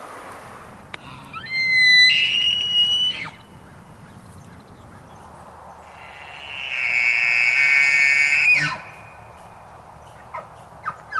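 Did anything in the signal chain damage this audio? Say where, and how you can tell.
No, nothing damaged it.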